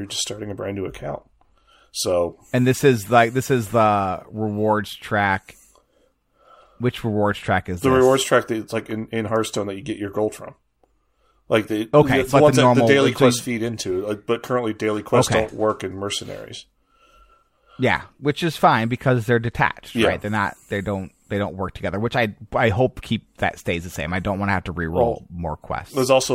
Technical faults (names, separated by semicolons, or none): block of digital silence